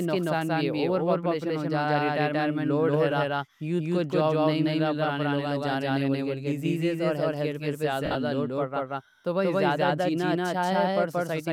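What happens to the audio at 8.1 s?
Lost LE Audio frames hit the audio from 8.05 to 8.15 s, between "اور ہیلتھ کیئر پہ" and "لوڈ پڑ". About 90 ms of audio is missing across that 100 ms stretch, with most of it in a single run, consistent with roughly nine dropped Bluetooth frames. The LC3 decoder covers each gap by repeating the last good spectrum with randomised phase signs, then fading it. Voiced sound there smears into a brief hissy, toneless wash that sinks toward silence before normal sound resumes.

A doubled audio track also runs through this moment, as it does across the whole clip. A second full-band copy of the speech trails the first by about a fifth of a second, at roughly the same level. It is likely a second capture path or a misaligned edit layering the audio twice. It has no reverberant tail, so it sounds like a hard, dry echo.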